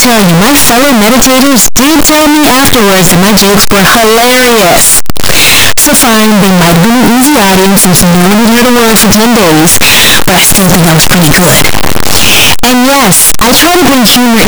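From start to finish the speech carries very loud, harsh distortion in which soft sounds are as loud as strong ones, which likely comes from signed and unsigned mixed up in its 8-bit samples.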